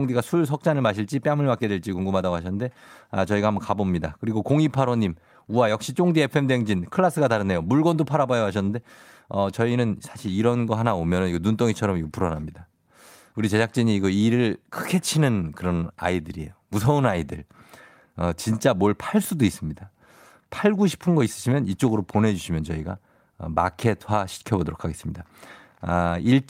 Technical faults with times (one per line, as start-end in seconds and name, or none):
none